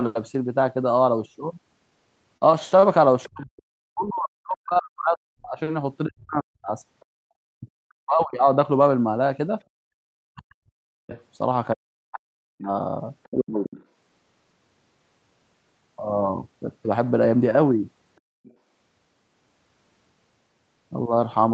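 Between 2.37 and 2.85 s the packets arrived late and the jitter buffer ran dry three times, producing repeated stalls (stutter). The receiver stretched the last sound to fill about 73 ms in total, the longest gap 36 ms, so the speech drags and hiccups without losing anything.

At 3.23 to 3.29 s the echo canceller likely left residue from the far end's loudspeaker in the microphone signal, so the other side's voice leaks through briefly at about 25 dB below the speech. From 3.29 to 8.47 s both sides were likely talking at once, and the canceller, unable to separate them, pulled the talker down as well. This speech suppressed in double talk covers roughly four seconds in patches, with dips as deep as about 40 dB, so the voice sinks, dulls and breaks into fragments. Inside that stretch, at 6.2 to 7.05 s, the other side's voice likely leaks through again, faint at about 35 dB down.

The same double-talk suppression likely returns from 10.14 to 13.67 s, cutting the talker by up to about 40 dB across roughly two seconds. 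Leaking far-end speech, likely residual echo, comes through at 11.1 to 11.22 s at about 25 dB down and more plainly at 13.23 to 13.84 s at about 20 dB down.

From 16.06 to 17.45 s the jitter buffer held more audio than its target and trimmed short pitch-period slices to catch up. This jitter buffer speed-up removes roughly 50 ms, so the speech runs at 103% speed at unchanged pitch.

At 18.44 to 18.54 s the other side's voice likely leaks through once more as residual echo, a short scrap at about 30 dB down. Throughout, the Opus call path and microphone processing band-limit the audio to 8 kHz.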